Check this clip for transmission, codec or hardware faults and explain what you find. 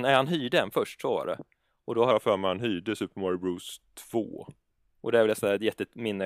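One fault is present, a wrong sample rate. From 2.11 to 4.86 s, just after "då har", the speech drops about 1.5 semitones and slows to 0.919 times normal speed. Samples are played at a lower rate than recorded, with no conversion, which fits 48 kHz audio played at 44.1 kHz.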